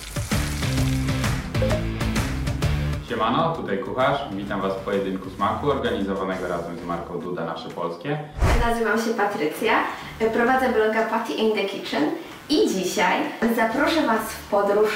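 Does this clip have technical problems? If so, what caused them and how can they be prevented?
Yes. Computer activity noise runs through the whole clip: a buzzy, chirping pulse at around 150 Hz, roughly 25 dB below the wanted sound, that swells and fades with the computer's workload rather than with the audio. Unlike mains hum, which holds a steady 50 or 60 Hz tone, this pattern shifts as processor and graphics load change the shared ground. Preventing it means isolating the audio path, using an external, separately powered interface or a ground-loop isolator.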